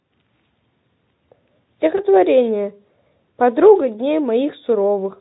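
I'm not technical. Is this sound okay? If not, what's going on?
No. At 1.95 s one 20 ms speech packet went missing: VoIP packet loss concealed by the speech codec. The decoder guessed the gap, leaving a brief smear until 2.01 s.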